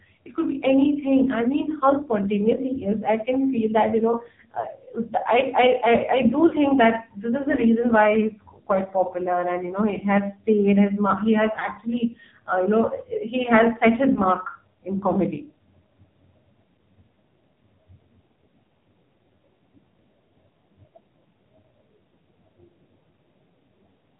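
AMR narrowband mobile codec runs from the start: the speech is cut off above 4 kHz and sounds buzzy and synthetic, since the heavily coded vocal-tract model gets only a few pulses per 5 ms subframe, which fits a low mode around 5.9 kbps. Lost AMR speech frames follow at 2.56–2.60 s, 4.60–4.67 s after "feel that you know", 6.48–6.56 s, 11.60–11.64 s after "his mark he has", and 14.14–14.20 s after "he has set his". In each, the decoder reuses the last pitch and filter settings with falling gain over a gap of about 20 to 40 ms, giving a short dip or warble where one frame is lost, and a drawn-out sound fading away where two are lost.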